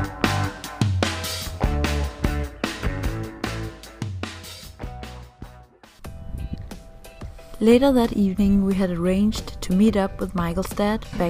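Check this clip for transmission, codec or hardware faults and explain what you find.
Nothing wrong is audible anywhere in this recording.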